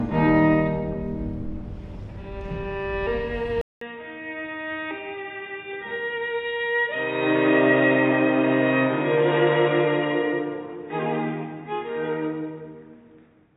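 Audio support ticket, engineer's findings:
Input likely switched to a poorer device at 3.61 s, holding to the end. Capture path dropped out for 200 ms at the changeover, then resumed band-limited: nothing above 3.8 kHz, giving dull, boxy sound. Level down about 10 dB after the switch. New device adds its own faint background noise, well below the signal.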